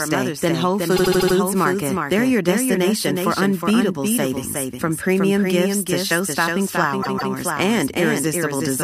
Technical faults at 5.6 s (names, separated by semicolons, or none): doubled audio track